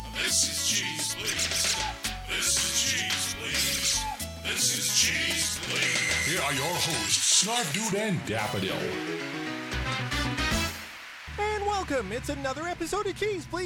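From 0.0 to 7.9 s, pre-emphasis is left on: the treble lift fits a J.17 curve with no matching de-emphasis, about 11 dB up at 10 kHz, sounding thin and sibilant.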